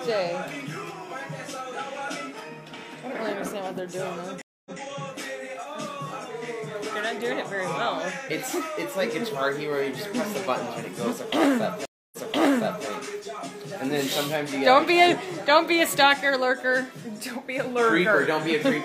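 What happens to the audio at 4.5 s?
At 4.5 s you're in the middle of a stream reconnect, running from about 4.42 to 4.80 s. The connection dropped, so the player went quiet for roughly 0.24 s, then reconnected and spun up a fresh decoder mid-stream. When sound comes back it has jumped back about 0.14 s, so you hear a short stretch repeated. The first resumed frame fades in rather than coming in at full level.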